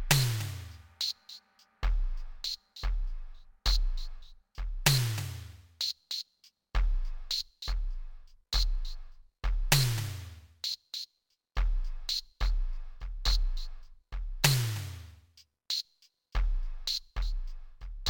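From start to finish the music shows a stereo-read-as-mono fault: interleaved left and right samples are taken as one channel, so playback runs at 0.5x speed and sits 12 semitones, a full octave, low, with a fainter mirrored copy folded into the upper half of the spectrum.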